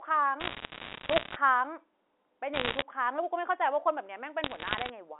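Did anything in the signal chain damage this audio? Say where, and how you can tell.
Yes. Three bursts of sharp, scattered ticks and crackle sit over the speech at 0.4 to 1.36 s, 2.54 to 2.82 s and 4.44 to 4.90 s. The speech underneath is unchanged and keeps the 300 to 3500 Hz telephone band of its G.711 mu-law coding. These are bit errors on a digital phone line, introduced in transmission. A flipped bit corrupts a single 8-bit logarithmic sample, and hits on an upper bit, or on the sign of a loud sample, produce sharp ticks. The density suggests roughly one to two percent of bits in error.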